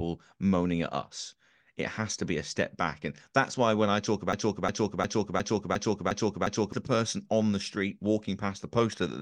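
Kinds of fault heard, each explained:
Broken-record loop: after "why when I talk" a 0.36 s slice of speech repeats seven times until "the person on the", likely a stalled player. The audio that belonged there is lost.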